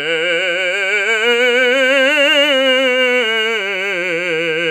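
Listening to this short piece of music, nothing technical stood out.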